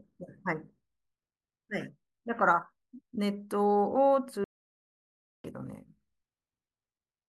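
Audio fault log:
4.44–5.44 s, audio dropout to silence: the speech cuts off abruptly and returns mid-flow after about 1.0 s of total silence with no room tone, likely from the input briefly disconnecting while silence was written. The waveform shows a flat line and the spectrogram a blank vertical band.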